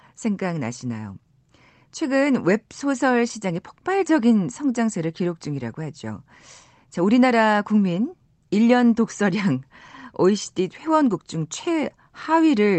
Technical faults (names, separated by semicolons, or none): none